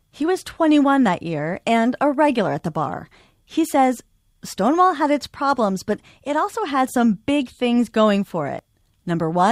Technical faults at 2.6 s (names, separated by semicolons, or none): overlap between stream segments